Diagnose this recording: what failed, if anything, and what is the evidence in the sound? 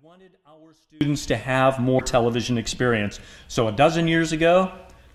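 For the first second, from the very start to about 1.01 s, the sound sits about 34 dB below the rest, nearly gone, with only a small leftover audible. That points to one channel inverted, likely a polarity flip in the wiring or routing ahead of the mono fold-down. With one side flipped, whatever the two channels share cancels when they're summed, background included, so all that survives is the little difference between them.

Then there's a short glitch from about 1.96 to 2.01 s, roughly 50 ms, that fits damaged data in a compressed stream, so this is a codec, storage or transport problem rather than anything analogue. When bytes in the encoded file get lost, zeroed or overwritten, the decoder misreads or throws out those frames, loses sync and hunts for the next valid frame header. What comes out is a brief glitch or gap right at that spot.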